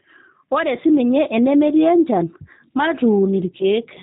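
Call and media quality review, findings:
Speech band-limited below 4 kHz, slightly rough and synthetic throughout, damage plainly audible. G.729 codec, fits 8 kbit/s G.729A: sparse-pulse excitation through a vocal tract filter.

Brief buzzy or noisy smear fading out, 3.58–3.65 s. VoIP packet loss concealed by the speech codec, fits one lost 20 ms packet: decoder extrapolated pitch and filter, decaying gain, slow recovery.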